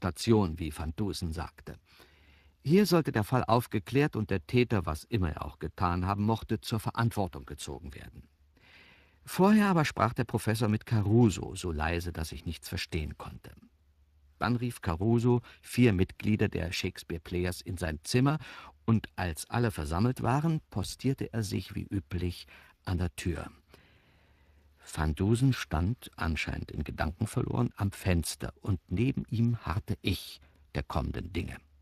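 Speech runs through the Speex codec for the whole clip, with plainly audible damage consistent with a setting around 22 kbps. Too few bits for the excitation make the voice hoarse and noisy, a CELP roughness rather than the swirly, watery smearing of transform codecs, and nothing is heard above 15.3 kHz. At 20.84 s there is a block of digital silence: an 8 ms stretch drops abruptly to silence and returns without any fade, so it registers as a tick or dip. Unlike packet-loss concealment, which fills a gap with smeared or repeated sound, this is a true hole, most likely from the output buffer not being filled in time.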